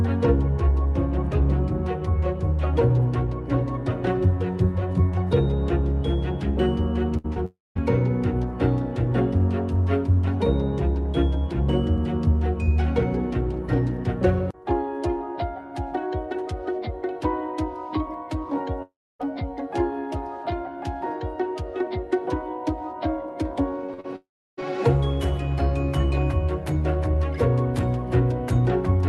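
Things go wrong first at 7.17 to 7.26 s with a burst of packet loss. About 60 ms of audio never arrived, and the receiver covered it by carrying the last sound forward and turning it down. You hear a brief held buzz or hiss that sags, then the audio jumps ahead with that chunk gone. It sits in a cluster with the next two faults, so the whole stretch around 7.2 to 7.8 s feels unsteady.

Right after, at 7.34 to 7.37 s, there's a short concealed packet loss of about 20 ms. The decoder patched it by continuing the previous sound and then blending back into the real audio. At this length it's just a quick smear or wobble.

Then come three long network dropouts, at 7.45 to 7.77 s, 18.82 to 19.21 s and 24.16 to 24.59 s. Each one starts with the last sound stretched out as a fading buzz or hiss, which then drops to silence. That silent tail runs about 0.2 s in the first, 0.28 s in the second and 0.33 s in the third. 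When the audio returns it has skipped ahead, so roughly 0.3 to 0.42 s is simply lost each time. The likely cause is the network stalling and nothing reaching the receiver for those stretches.

From 23.86 to 24.64 s there's repeated packet loss, the robotic sound. Four separate gaps, the longest about 45 ms, each get patched with continued sound. That adds up to about 14% of the stretch, and the back-to-back patching makes it choppy. The third dropout lands right in the middle of this stretch. The call path itself runs through Opus, and the top end tops out around 12 kHz.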